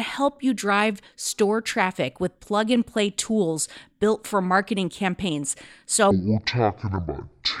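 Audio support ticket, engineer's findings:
Section at the wrong speed, 6.11 s to end. Speech drops to 0.515x speed, about ten semitones lower. Pitch and tempo fall together. Likely cause: playback or edit clocked at roughly half the recording rate. Slowed passage runs 1.49 s.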